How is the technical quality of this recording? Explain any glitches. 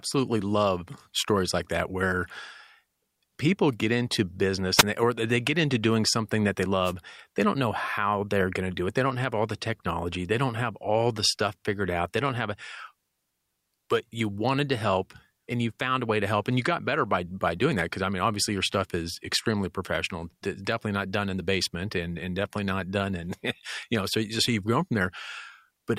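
The recording is marred by two wireless microphone noise hits, at 4.77 to 4.83 s and 6.84 to 6.93 s. As the FM radio path fades through cancelling reflections, receiver hiss swells. Unlike a digital dropout's abrupt silence, each hit is a short swish of static that rises and falls.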